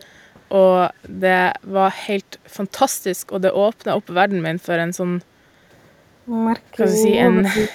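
Echo leak at 0.00 to 0.06 s in this speech clip: a very faint copy of the sound, roughly 35 dB down, arrives 351 ms late, likely from a loudspeaker's echo canceller not fully removing its own playback. Speech suppressed in double talk from 7.3 to 7.74 s: the speech dips by up to about 25 dB for nearly half a second as both sides talk, likely because the echo canceller cannot separate the talker from the echo.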